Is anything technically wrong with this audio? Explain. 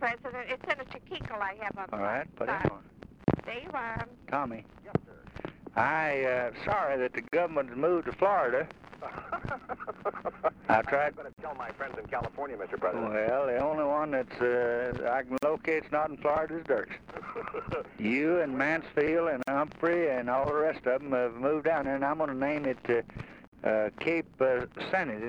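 Yes, there is a gap at a join of encoded pieces, repeating about every 4 seconds: at 3.24 to 3.28 s (about 36 ms), then at 7.28, 11.33, 15.38, 19.43 and 23.48 s (49 ms each). The audio was evidently encoded in separate chunks and spliced without trimming, so each encoder's start-up delay and final-frame padding remain as silence. The result is a brief dropout whose edges are smeared by the codec, after which the sound resumes where it left off.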